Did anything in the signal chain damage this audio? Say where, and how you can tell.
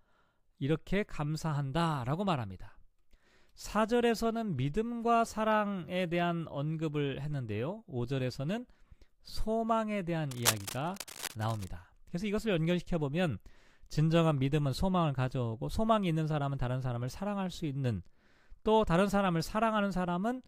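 Yes. Cable scratch noise appears in the analogue wiring stage from 10.31 to 11.68 s. Dense, uneven bursts of scratching and rustling sit over the speech at about 5 dB below it. This points to a worn cable or connector being moved, which is the likely cause, so its contact resistance flickered rapidly.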